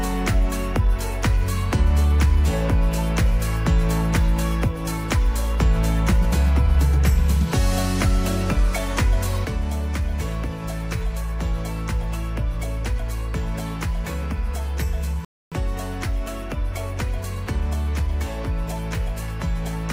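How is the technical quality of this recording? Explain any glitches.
The recording has two clear technical faults from about the middle onward.

From 9.45 s to the end, the level drops abruptly by about 6 dB and stays down. This is most likely one channel dropping out. When one side of a stereo pair goes silent and playback folds to mono, material shared by both sides keeps only half its contribution. Material unique to the lost side is gone entirely.

At 15.25 s there is a rebuffering stall lasting until 15.52 s. The sound cuts to silence for about 270 ms, then picks up exactly where it stopped. The player ran out of downloaded audio and waited for more data to arrive. No material is skipped. The pause simply inserts extra time, so the flow is interrupted by a gap that was never in the source.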